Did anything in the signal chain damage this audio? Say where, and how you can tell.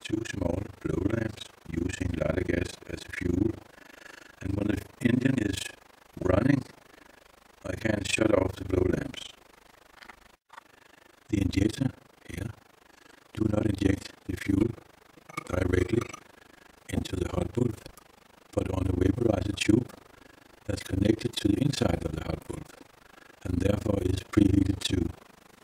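Yes. A frame-based processing stage damaged it with overlap-add ripple across the whole clip. The level swings by about 60 dB around 30 times a second, a fast, rough flutter. The frames were overlapped with windows that do not sum to constant gain.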